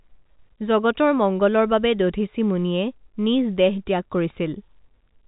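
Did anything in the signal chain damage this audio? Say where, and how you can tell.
No, the speech runs over a G.711 telephone coding path, heard as a band that ends around 3.8 kHz, and no stage in the chain leaves any damage on it.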